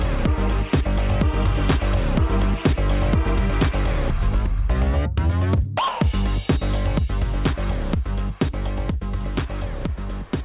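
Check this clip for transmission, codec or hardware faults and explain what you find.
No transmission, codec or hardware fault is audible anywhere in the clip.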